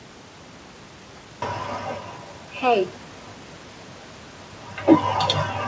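At 1.16 to 1.18 s the speech makes a skip ahead. Roughly 0.4 s of audio never plays, either lost in transit or discarded when the jitter buffer overflowed while later audio was already queued. The two sides are butted together with no fill, so the speech lurches forward mid-flow. On a waveform the envelope changes abruptly at that point with no silent gap. On a spectrogram the harmonic tracks break and restart at new pitches and formants, showing a hard vertical seam.

From 2.00 to 3.06 s there is a jitter buffer speed-up. The buffer was holding more delay than its target, so the receiver trimmed away short chunks of one or a few pitch periods, over and over, removing around 100 ms in total. Playback runs at about 110% of normal speed while the pitch stays the same, and the speech sounds rushed. On a spectrogram the harmonics keep their spacing, but syllables and pauses appear compressed in time. 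This happens around the same time as a level change from the talker shifting position.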